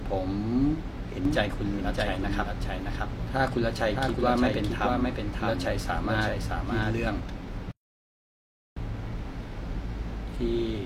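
A speech recording with two faults. From 1.25 to 7.19 s, the audio was most likely captured a second time through a slower path, or an edit left two copies out of step. The result is a doubled audio track: a full-band copy about 5 dB quieter trails the original by roughly 0.7 s. It has no reverb tail or room colour. It cuts in abruptly at the start and drops out just as sharply at the end. Later, the player likely ran out of data or had its thread blocked, causing a playback stall from 7.71 to 8.77 s. The speech stops mid-flow and the output goes silent for about 1.05 s. The speech then resumes once the player recovers.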